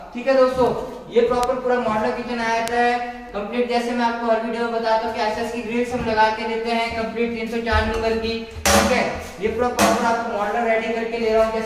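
Bit error spikes occur at 0.67 s, 1.43 s and 2.68 s. Each time, a single flipped bit corrupts two or three consecutive samples, pushing their value by a power of two before they snap back. Each is heard as one sharp, broadband tick unrelated to the surrounding sound. The first peaks at only about -20 dBFS. The later two reach about -2 dBFS.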